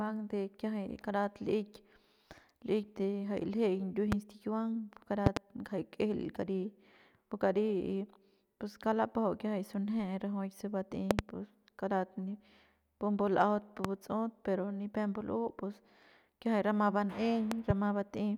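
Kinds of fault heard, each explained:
Loud pop: a sudden voltage step or pulse added to the signal path, likely from a plug, switch, static discharge or driver glitch, and then shaped by the circuitry after it. It occurs five times, at 4.12, 5.26, 11.11, 13.85 and 17.52 s, peaking about 20 dB above the speech, and about 25 dB at 11.11 s, just before "pus karat". The events at 5.26, 11.11 and 17.52 s are double pops, and the speech carries on underneath each one.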